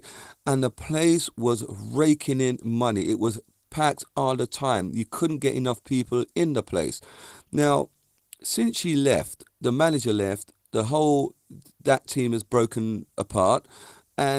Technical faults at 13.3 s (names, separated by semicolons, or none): Opus voice compression